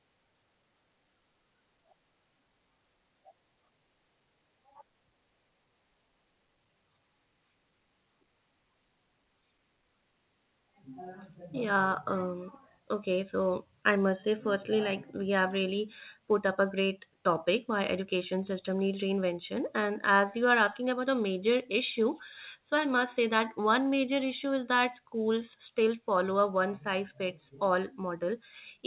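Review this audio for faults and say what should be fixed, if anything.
At 3.0 s the speech lurches forward with almost no gap, about one and a half seconds of it simply gone and the two sides butted together by 3.1 s. This is a skip ahead: later audio was already waiting, and a stretch was dropped, either on the way or by the jitter buffer overflowing, through a call path whose narrow band, with nothing above 4 kHz, points to G.711 at 64 kbps. A larger adaptive jitter buffer that time-compresses audio gradually, rather than discarding a block at once, would prevent it.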